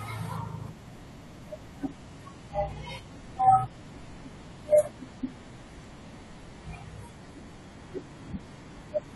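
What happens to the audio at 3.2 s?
At 3.2 s the audio is inside a stretch of adaptive stream at a lower bitrate, which runs from 1.88 s to the end. At 1.88 s the quality drops abruptly with no gap: the treble thins and codec artefacts thicken, which fits a switch from roughly 96 to 32 kbit/s AAC. A spectrogram shows a hard ceiling at 11.5 kHz, while the waveform stays continuous.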